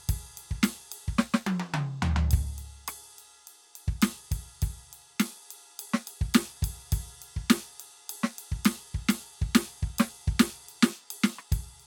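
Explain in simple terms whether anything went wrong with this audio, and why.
Nothing went wrong with this piece of music. At no moment while listening does any technical problem show up.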